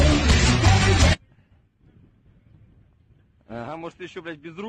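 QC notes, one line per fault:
No technical faults can be heard in the recording, and the signal stays continuous and stable.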